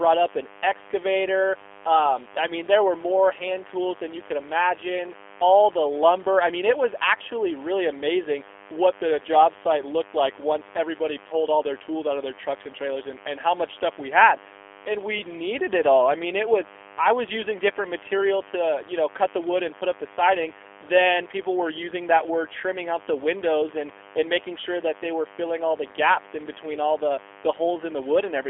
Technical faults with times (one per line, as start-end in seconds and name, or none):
0.00-28.49 mains buzz
0.00-28.49 G.729 codec